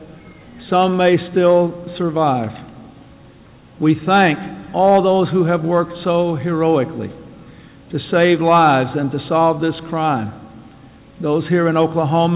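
No technical faults are audible.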